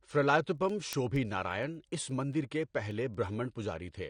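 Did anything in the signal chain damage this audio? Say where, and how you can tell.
Yes, at two stages. At the codec stage, the whole clip is band-limited, with nothing above about 9.7 kHz, and the speech sounds dull and smeared, with a warbling, fizzy texture on sustained sounds and sibilants. That points to a heavily starved perceptual coder, likely AAC compression at a low bitrate, on the order of 32 kbps. The encoder lowered its cut-off and quantised the remaining bands coarsely, leaving audible holes and artefacts.

At the digital interface or converter stage, there are word clock ticks: sharp clicks of uneven strength from 0.11 s to 4.08 s, repeating at a steady rate of about one every 0.1 s, roughly 40 in all. Each one behaves like a single sample being dropped or repeated. That is what happens when a receiving device runs on its own clock instead of locking to the sender's. Each slip marks where the two clocks drift past each other, and the tick rate fits a mismatch of roughly 200 ppm.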